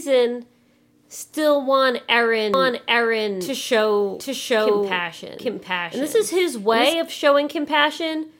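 Right after "still want", at 2.54 s, a second copy of the speech abruptly appears about 0.7 s behind the first, at roughly the same loudness, and stays until 6.94 s, where it cuts off just as suddenly. It is a doubled audio track: a dry, full-band repeat with no decay or room colour. The likely cause is the same signal reaching the mix twice, once through a slower capture path or an edit holding two out-of-step copies.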